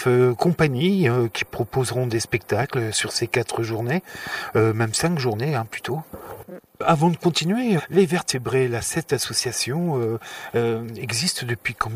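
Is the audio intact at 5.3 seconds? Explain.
Yes, at 5.3 seconds the sound runs on cleanly with no dropout, click, glitch or other fault to be heard.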